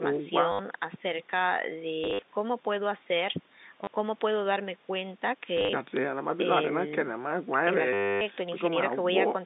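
Packet loss with last packet repeated at 0.52, 2.04 to 2.22, 3.84, 5.57 to 5.73 and 7.93 to 8.21 s: lost audio is replaced by replaying the previous chunk, causing buzzing robotic stutters in the speech.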